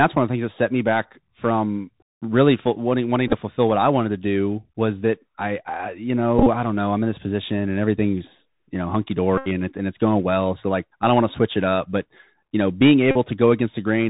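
Throughout the speech a granular hiss sits under everything, s sounds come out scratchy, and loud bright syllables break up and distort, with nothing above about 4 kHz getting through. This is the Bluetooth CVSD headset codec at 64 kbps: each sample is coded as a single up-or-down bit with an adapting step size, so fast high-frequency movement outruns the step, and the narrow band cuts off the top end.

At 3.28 to 3.34 s a cluster of small ticks and a brief rough flutter appears, with about 30 ms of audio lost across 45 ms and no run longer than a few milliseconds. At 6.39 to 6.47 s the flutter firms into a short buzz. About 52.5 ms is lost over 75 ms, with one stretch of roughly 30 ms. At 9.38 to 9.48 s there is a steady buzz near 267 Hz lasting about 82.5 ms, and at 13.11 to 13.16 s a similar buzz lasts about 45 ms. Each of these is a Bluetooth headset packet repeated. When voice packets between headset and phone were lost, the chip decoded the previous packet's bits again. 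Repeating every 3.75 ms, that reused packet forms the buzz until good packets resume.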